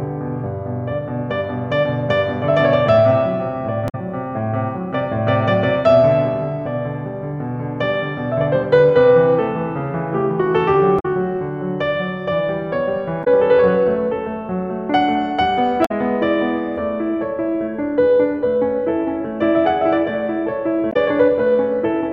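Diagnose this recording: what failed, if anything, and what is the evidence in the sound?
Codec stage: damaged data in a compressed stream. Short glitches at 3.85–3.95, 10.96–11.06, 13.21–13.28, 15.82–15.91 and 20.89–20.96 s in the music, where corrupted frames broke decoder sync.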